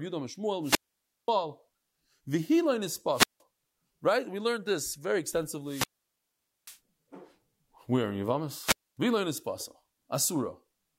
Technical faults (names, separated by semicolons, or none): wireless microphone squelch dropout